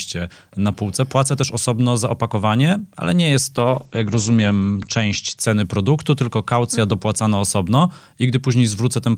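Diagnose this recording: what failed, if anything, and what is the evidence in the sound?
Call processing, via the codec: a call bitrate drop from 3.56 to 5.43 s. Bandwidth falls from 20 kHz to 8 kHz and the speech turns coarse, worst for 1.34 s. That fits the bandwidth estimate pushing Opus from about 32 to 12 kbps, before it recovers.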